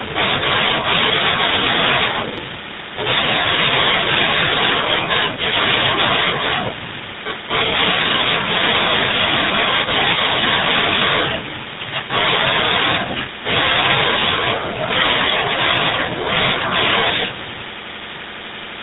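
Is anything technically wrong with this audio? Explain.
Yes. Throughout the whole recording, the speech has been carried through the GSM full-rate codec, and the damage is plainly audible. The codec models the vocal tract and excites it with a sparse, regularly spaced pulse train built from only every third excitation sample, at a rate consistent with about 13 kbps, and it passes nothing above 4 kHz. The result is a muffled, band-limited voice with a buzzy, gravelly roughness. The call's microphone processing leaves a loss of the deepest bass, which is expected.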